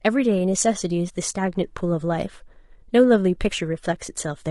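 Speech, carrying low-delay AAC compression across the whole clip. The voice sounds rough and grainy, with noise filling the gaps between harmonics and a thin, synthetic-sounding top band. This is likely AAC-ELD, whose short frames blur pitch detail, at a rate fitting around 32 kbps.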